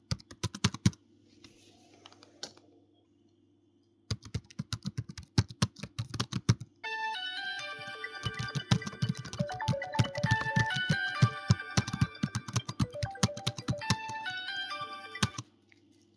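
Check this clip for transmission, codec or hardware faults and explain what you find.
No transmission, codec or hardware fault can be heard anywhere in the audio, and the signal stays continuous and stable throughout.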